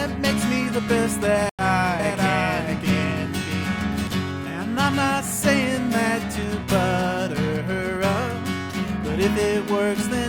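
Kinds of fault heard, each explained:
Stream reconnect: the connection drops around 1.49 s, leaving about 93 ms of silence, and the sound picks up roughly a tenth of a second further on.
Doubled audio track: from 1.99 to 4.07 s a second, dry copy trails about 0.7 s behind at around 5 dB quieter, likely from a slower capture path.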